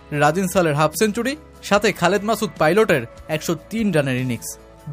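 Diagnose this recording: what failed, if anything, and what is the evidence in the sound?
No fault is audible.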